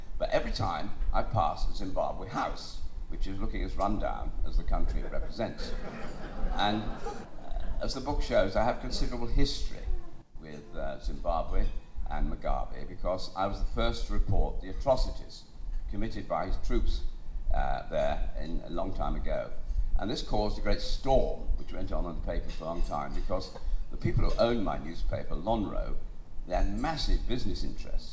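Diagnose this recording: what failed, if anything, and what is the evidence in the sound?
Nothing failed: the audio came through a wideband call path whose content stops at 8 kHz, which fits a G.722 codec, and no stage in the chain shows a fault.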